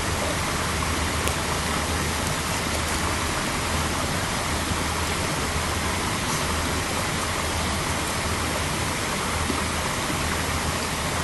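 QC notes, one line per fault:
1.28 s, file header played as audio: a joined WAV piece kept its header, so those few dozen bytes played as samples, giving one sharp, loud click.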